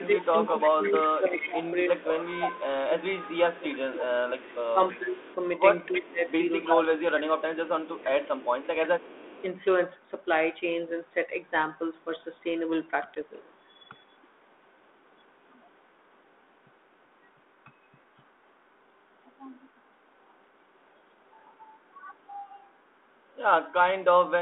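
From 0 to 9.45 s the speech dips repeatedly, by up to about 20 dB and for roughly 7 s in total. This is speech suppressed in double talk, likely an echo canceller turning down its own talker while the far side also spoke. A second suppression, about 10 dB deep, occurs at 13.46 to 13.55 s.

Over the same opening stretch, echo leak is audible at 0.44 to 2.06 s and 3.33 to 9.43 s. A copy of the voice trails by 320 ms, about 10 dB and then 15 dB below the speech. It is likely residual loudspeaker pickup passed back by an incomplete canceller. A much fainter echo, about 35 dB down, returns at 13.33 to 14.27 s.

At 13.15 s a 10 ms hard-edged hole marks packet loss on an ADPCM call. The G.726 decoder's predictor briefly loses step, so speech resumes slightly distorted before settling.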